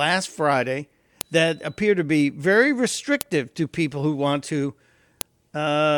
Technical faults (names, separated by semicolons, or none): file header played as audio